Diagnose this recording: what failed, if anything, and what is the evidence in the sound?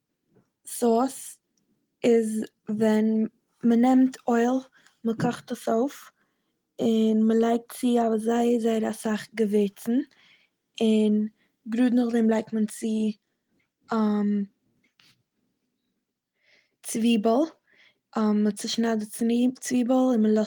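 Nothing in this recording has failed at any stage between capture and playback. The speech carries the mark of Opus voice compression in its hybrid mode, with the band kept fullband up to about 20.1 kHz and only light coding damage, which fits a rate around 24 kbps.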